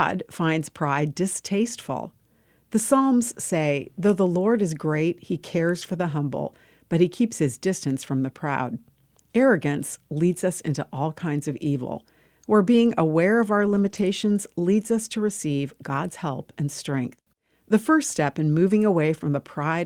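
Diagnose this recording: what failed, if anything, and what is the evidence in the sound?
Lost packets rebuilt from error correction appear at 5.81–5.95 s (after "is great he cares"), 13.65–14.03 s (after "being aware of our"), 15.61 s (after "leads us to") and 16.91–16.97 s. The network dropped packets, and the Opus decoder filled each loss with the low-bitrate copy carried in the next packet. There is no gap, only a briefly rougher, noisier texture. The longest rebuilt stretch, about 200 ms, starts near 13.7 s.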